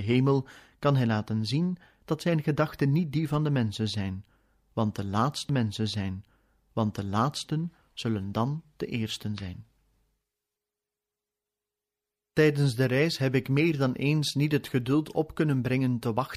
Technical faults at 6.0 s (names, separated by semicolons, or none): stream segment repeated